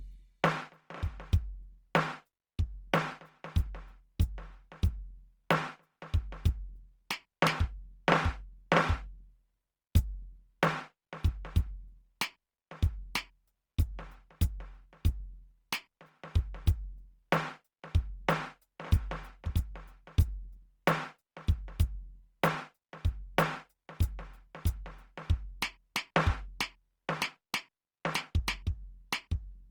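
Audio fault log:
throughout, Opus compression: the music sounds grainy and rough, with tones smeared into noise while full bandwidth holds to about 20.1 kHz, likely from Opus in its CELT mode at roughly 24 kbps, filling starved bands with folded or noise-like content instead of leaving gaps.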